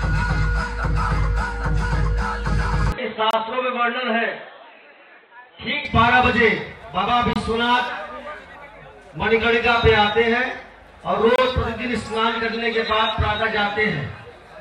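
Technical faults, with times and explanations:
2.92–5.85 s, input switched to a poorer device: The sound turns dull and boxy at once, with nothing above 4.1 kHz, drops a little in level, and gains a faint new noise floor well beneath it. There is no silence at either change, and the full brightness returns at 5.85 s. This is likely a switch to another input, such as a different microphone or a headset's call profile, whose narrower band, tone and noise replace the original device's.
3.31–3.33, 7.33–7.36 and 11.36–11.38 s, gap between chunks: Three short holes of about 25 ms cut into the sound, evenly spaced 4 s apart. Nothing seems to be missing around them. The sound simply stops and resumes. That regular spacing points to audio handled in 4 s chunks, with silence left at each join, for example from codec padding or from playback starting each chunk slightly late.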